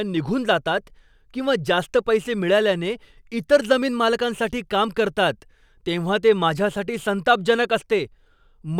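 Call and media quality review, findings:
No audible faults found.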